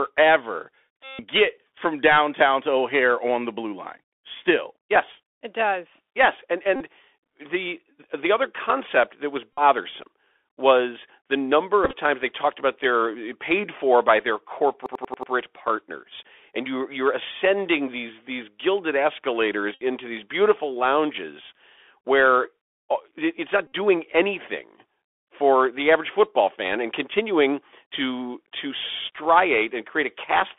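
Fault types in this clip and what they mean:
Bluetooth CVSD headset codec: a one-bit delta codec squeezes the speech into a 300 Hz to 3.5 kHz band, leaving it muffled, scratchy on sibilants and grainy with hiss.
Bluetooth headset packet repeated: lost headset packets were replaced by replaying earlier ones, causing brief buzzy smears, the longest about 150 ms near 1.0 s.
System hang loop: a stall left the audio hardware cycling one buffer of about 93 ms, so a fragment near 14.9 s stutters five times at about 11 Hz.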